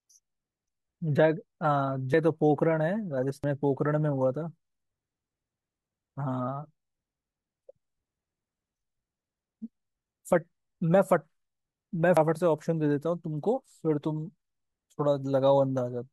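At 2.14, 3.44 and 12.17 s the speech jumps ahead, skipping about a fifth of a second each time, likely a dropped buffer (overrun). The waveform shows an abrupt splice with no gap, and the spectrogram a thin vertical broadband line.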